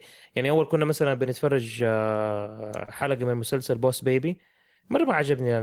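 At 2.85 to 2.90 s, short concealed packet loss: about 20 ms of speech arrived too late, so the decoder extrapolated 22 ms. It sounds like a brief smear or wobble.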